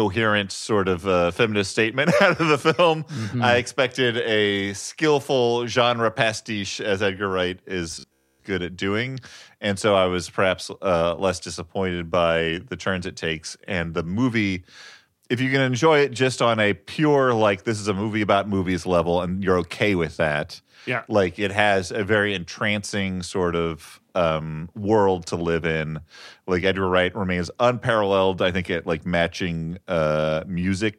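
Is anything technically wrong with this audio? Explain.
Yes. Robotic sound from repeated short buffers, 7.92 to 8.44 s: the speech becomes a rigid, metallic 66.7 Hz buzz, likely from one 15 ms fragment looping while late-arriving audio was skipped.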